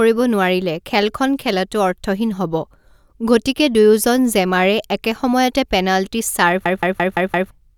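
After "জেমাৰে একে সময়তে পেনাল্টি", from 6.66 to 7.51 s, a system hang loop replays one 171 ms slice five times at about 5.9 Hz, a machine-gun stutter that fits an 8192-sample ring buffer. Roughly a second of audio is lost. The waveform and spectrogram show identical repeating blocks with sharp seams.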